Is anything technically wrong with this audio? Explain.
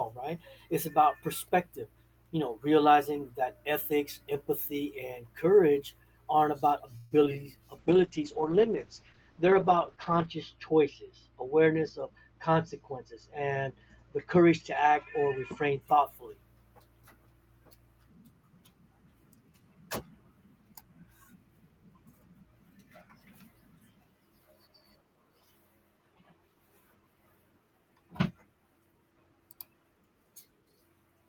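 Yes, the speech has four kinds of network and codec fault, clustered between about 7 and 16 seconds.

From 6.97 to 7.13 s there is a call audio freeze. The likely cause is packets stalling in transit until the jitter buffer ran dry. The receiver kept extending the last sound for about 136 ms, which comes across as a brief buzzy or hissy stretch that fades. When delivery resumed, playback picked up where it left off. Nothing was lost, but about 136 ms of extra delay was inserted into the speech.

Right after that come two short concealed packet losses, at 7.25 to 7.28 s and 7.30 to 7.32 s. Each time, about 20 ms of audio never reached the decoder in time. The receiver covered each gap by continuing the preceding sound, pitched if voiced and as shaped noise if not, then blended back into the real signal. The result is two quick smears or wobbles only a few hundredths of a second apart.

From 7.80 to 15.87 s there is a call bitrate drop. 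The bandwidth estimate fell and the encoder was cut from 32 kbps to 8 kbps, bottoming out for about 2.5 seconds. With so few bits, Opus codes more coarsely and narrows the audio band from 20 kHz to 8 kHz. The speech turns muffled, rough and somewhat watery, and loses its top end until the rate recovers.

Inside that stretch, from 11.66 to 13.17 s, there is a jitter buffer speed-up. The buffer had built up more audio than its target, so the receiver repeatedly removed pitch-period-sized slices, roughly a seventh of a second in total. Playback runs at about 108% speed with unchanged pitch, so the speech sounds slightly hurried there.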